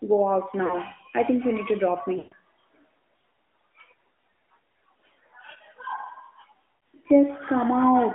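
AMR narrowband mobile codec damage runs through this whole speech recording: the audio is confined to roughly 200 Hz to 3.5 kHz, and the plainly audible buzzy, synthetic texture comes from a vocal-tract model rebuilding the speech from sparse pulses, which fits a mid-rate mode of about 10.2 kbps. Lost AMR speech frames occur at 0.66 to 0.78 s, between "go out" and "I think you need"; at 2.18 to 2.33 s, after "you need to drop"; and at 6.77 s. At each point the decoder carried the last good pitch and spectral settings forward with falling gain. The gaps, about 40 ms, 140 ms and 60 ms long, fit runs of two, seven and three 20 ms frames, and the longest draws out and fades noticeably.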